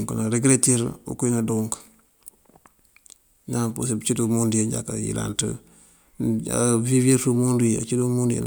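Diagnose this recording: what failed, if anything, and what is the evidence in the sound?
Nothing in the recording points to a failure at any stage of the chain; the speech signal stays continuous and intact, with no audible defect anywhere along it.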